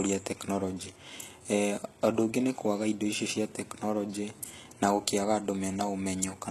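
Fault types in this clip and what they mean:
HE-AAC compression: The speech was likely squeezed through HE-AAC at a very low rate, which fits a bitrate around 16 kbps. Only the lower spectrum is properly coded, and the treble is rebuilt by copying lower bands upward under a coarse envelope. The damage is plainly audible. The upper range sounds synthetic, with harmonics misaligned across the crossover, s sounds turning gritty and lispy, and nothing at all above 12.3 kHz.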